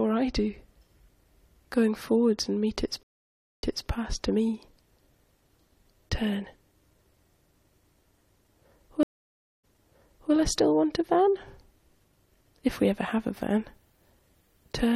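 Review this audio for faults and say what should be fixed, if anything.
Stream reconnect at 3.03–3.88 s and 9.03–10.33 s: the connection dropped, leaving about 0.6 s of flat-line silence (a blank spectrogram band), then a fresh decoder resumed 0.26 s and 0.70 s earlier, repeating sound. Buffer more deeply and resume from the last decoded position.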